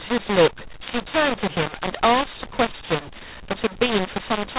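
Harsh, gritty distortion runs through the whole of this speech clip, with levels jumping unevenly and the pauses filled with hiss instead of silence. It is a mu-law and A-law mix-up: telephone audio coded as G.711 mu-law was decoded as A-law, scrambling the level mapping and lifting the quietest samples well above zero.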